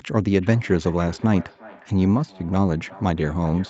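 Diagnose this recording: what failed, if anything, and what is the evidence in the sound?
Feedback echo between two devices runs from 0.41 s to the end, at the call-processing stage. A second device in the room replays this microphone's signal, which is picked up again, so the speech returns roughly every 0.4 s, about 21 dB down, out of either echo canceller's reach.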